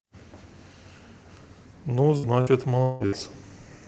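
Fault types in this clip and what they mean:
Repeated packet loss (robotic sound), 2.17 to 3.15 s: four dropouts in quick succession, the longest 177 ms. Each gap is bridged by stretching the preceding sound, so about a third of that stretch is synthetic fill, giving choppy speech.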